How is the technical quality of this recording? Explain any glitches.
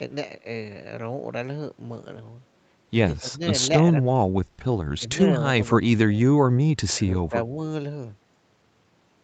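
The speech has a handful of short level dips, clustered in the middle of the clip, sitting on top of audio that tops out around 8 kHz, as a wideband Opus call path would produce. The dips fall at 3.2 to 3.41 s, 3.83 to 4.11 s, 4.98 s, 5.26 to 5.42 s, 5.73 to 5.9 s, and 7.29 to 7.34 s. Each one pulls the voice down briefly, anywhere from a slight sag of roughly 5 dB to a near-dropout of around 20 dB at 3.83 s. The likely cause is speech suppressed in double talk: the echo canceller couldn't tell this talker apart from echo of the far side and ducked everything, leaving short chopped or ducked moments.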